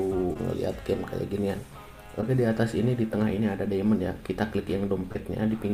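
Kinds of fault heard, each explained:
Short concealed packet loss: missing 20 ms chunks were patched by extending the preceding sound, heard as brief smears at about 0.33, 2.21 and 5.12 s, unlike clean dropouts to silence.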